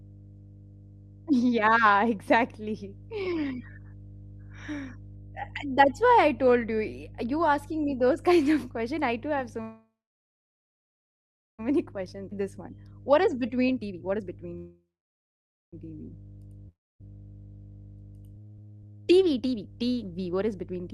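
A steady low tone sits under the speech from start to finish. It is mains hum at 50 Hz, roughly 20 dB below the talker, with some low harmonics. It comes from the power line coupling into the signal, most plausibly through a ground loop or a transformer near the recording chain.

Just after "I do have so", at 9.61 s, the speech stops and the last sound carries on as a fading buzz. By the time the audio resumes at 11.61 s, about 1.69 s of that wait has fallen to silence. This is a call audio freeze, likely caused by packets being held up in transit until the jitter buffer ran dry. Nothing is lost: the talk picks up where it broke off, with roughly 2 s of extra delay inserted.

From 11.79 s to 14.53 s the speech comes out hurried, at about 124% of normal rate, with no change in pitch. That is a jitter buffer speed-up. The receiver trims small pitch-period slices, around 0.7 s in total, to work off the backlog that built up during the freeze.

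Inside that stretch, at 12.30 to 12.33 s, playback jumps forward with almost no gap. This is a skip ahead: roughly a second of queued audio is discarded so the delay drops quickly, and the two sides are spliced nearly directly.

A second call audio freeze runs from 14.57 s to 15.75 s. The sound smears into a fading tail, then about 0.88 s of silence. It is again likely a delayed-packet stall, adding about 1.15 s of delay while keeping everything.

At 16.69 s to 17.03 s there is a brief buzz that dies into about 0.26 s of silence. When the speech returns, about 0.32 s of it is gone. This is a long network dropout, likely a run of packets that never arrived, which the receiver covered with a decaying fill before moving on past the lost part.

Finally, from 18.34 s to 20.90 s, another jitter buffer speed-up rushes the speech to about 149% of normal rate at unchanged pitch. Around 1.5 s is cut out in tiny pieces to pull the accumulated delay back down.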